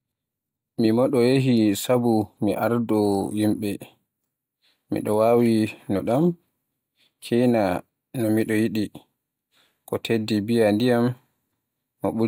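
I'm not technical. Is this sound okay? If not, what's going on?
Yes, there are no technical faults in this recording.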